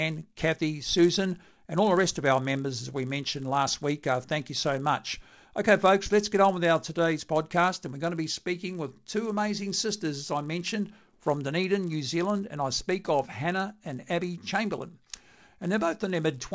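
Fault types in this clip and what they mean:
Resampler restarted on every block: each 10 ms block was converted from 48 kHz to 16 kHz alone. Edge errors make a 100 Hz buzz, heard only under speech.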